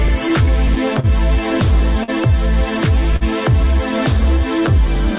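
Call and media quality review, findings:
Clock drift between sender and receiver: recurring timing hiccups at uneven intervals across the whole clip. Sender clock runs a few percent slow, so the jitter buffer keeps draining and repeats or stretches material. Waveform shows irregular repeated segments and small envelope discontinuities.

Scattered short gaps: 0.08 to 1.06 s, about five holes, longest around 40 ms; 4.39 to 5.19 s, about four shorter ones. Lost or late packets were patched by continuing the previous sound. Brief ticks and smears appear as short smeared vertical patches on the spectrogram.

Short stall from a late packet: 2.04 to 2.10 s (43 ms held) and 3.16 to 3.23 s (45 ms held). The buffer ran empty and the last sound was stretched until the packet arrived. Spectrogram shows frozen horizontal bands; waveform shows a periodic, dipping stretch.

These sit on a G.711 mu-law path at 64 kbps, with a flat spectral ceiling at 4 kHz.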